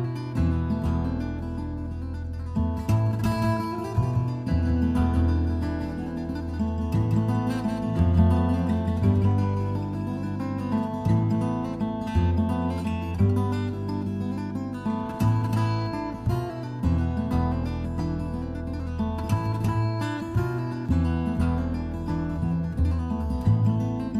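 A second capture path, likely running slower than the main one, feeds the same audio into the mix again, producing a doubled audio track from 3.32 s to 10.8 s. The copy trails the original by roughly a fifth of a second and sits about 5 dB quieter, so every event is followed by a full-band repeat with no decay or room colour, like a flat slapback. The copy cuts in abruptly at 3.32 s and drops out just as sharply at 10.8 s.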